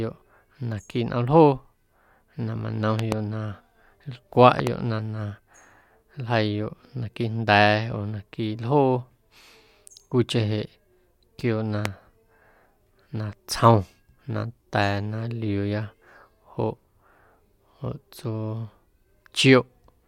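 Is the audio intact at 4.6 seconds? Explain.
No. From 4.59 to 4.69 s there is a loud pop, heard as two sharp pops in quick succession that stand roughly 15 dB above the speech, which continues underneath. This is likely a sudden voltage step or pulse entering the signal path, as from a connector, switch, static discharge or driver glitch. The downstream circuitry shapes each pulse into a brief transient, producing the double click over the ongoing sound.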